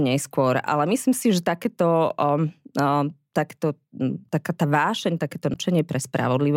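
A speech clip with one short glitch. Just after "taká tá vášeň takéto", from 5.53 to 5.56 s, the sound breaks for about 30 ms and then carries on slightly further along. That length fits a single MP3 frame of about 26 ms. The likely cause is a broken MP3 bit reservoir. Frames lean on spare bytes stored in earlier frames. When a frame goes missing, the next one reads the wrong bytes. That brief stretch decodes as junk, and the audio skips ahead.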